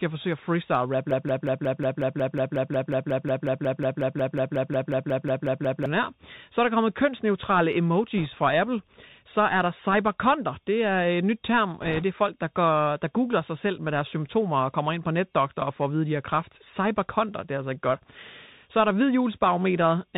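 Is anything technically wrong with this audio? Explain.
Yes, there are three kinds of fault in this speech clip.

Throughout, the sound carries the Bluetooth CVSD headset codec, which fits a 64 kbps CVSD stream. Its one-bit delta coding follows the waveform with an adapting step, so nothing above 4 kHz survives. The spectrogram shows a hard ceiling there and a granular hiss across the floor. Sibilants sound scratchy, and loud bright moments distort where the step can't keep up.

From 1.11 to 5.86 s, right after "forsøge at freestyle rap", a broken-record loop repeats one 0.18 s fragment about 26 times, back to back. The likely cause is a stall that kept replaying the last buffer held. The waveform shows identical blocks tiled end to end, and the speech that should have played there is gone.

Bit errors on a Bluetooth voice link appear twice. From 8.18 to 8.26 s, after "er der kommet kønsneutrale", the error rate is around 1.5 percent. 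From 11.81 to 12.04 s, between "øh et nyt term" and "er folk der går", it is heavier, around 3 percent. Flipped bits each nudge the signal only slightly and then fade, so instead of clicks there is a rushing crackle. On a spectrogram this shows as a broadband smear below 4 kHz, denser in the second burst.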